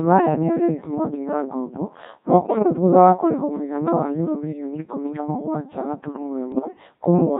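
Speech carried through the Codec 2 vocoder at about 1.6 kbit/s sounds robotic and buzzy throughout, because the voice is rebuilt from sine waves rather than the original waveform. Bit errors on digital voice radio break in from 2.44 to 2.67 s after "ngombo mwaka" and from 6.52 to 6.68 s after "ikũmi na mũgwanja gaturumo". Pitch, level and tone lurch into warbling gibberish, consistent with roughly one bit in ten flipped. These errors differ from dropouts because the sound is scrambled rather than silenced.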